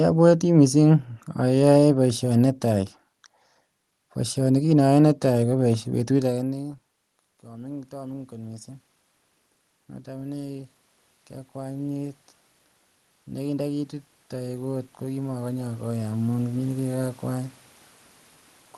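At 7.46 s the automatic gain rising begins: after the talker drops back around 6 seconds, the input falls by about 23 dB, and the gain control lifts its gain by about 5 dB until 8.72 s, so voice and room noise swell together. A second rise, about 8 dB, runs from 13.34 to 16.81 s. On a waveform the envelope climbs steadily, and on a spectrogram the noise floor brightens below the call codec's roughly 12 kHz ceiling.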